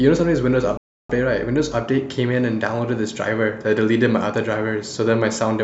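At 0.77 s a rebuffering stall halts playback for 0.32 s until 1.10 s; the player starved of data, leaving a flat waveform gap before the speech resumes exactly where it stopped.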